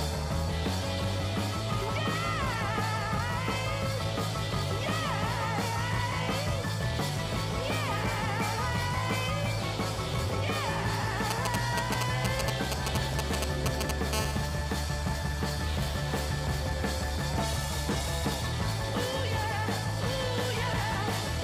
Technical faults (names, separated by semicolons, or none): GSM signalling bursts; GSM phone buzz